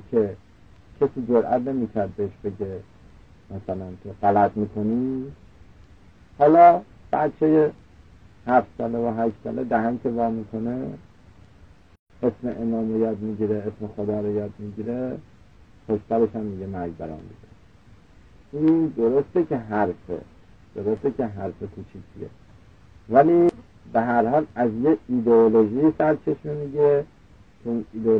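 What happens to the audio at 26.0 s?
Nothing goes wrong at 26.0 s; the audio runs on intact through that moment with no audible fault.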